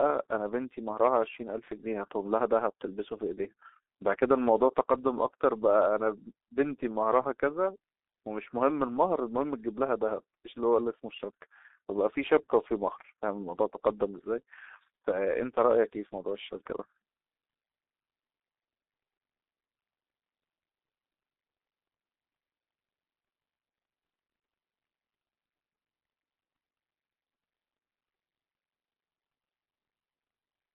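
A speech recording, heavily damaged by the G.723.1 codec from start to finish. The sound is muffled and hoarse. Nothing comes through below about 250 Hz or above 3.7 kHz, so it has a narrow telephone-line band. Consonants smear together. The codec works in 30 ms frames and refreshes its model of the voice slowly, so fast changes blur. The coarse, rasping texture fits a bitrate near 6.3 kbit/s.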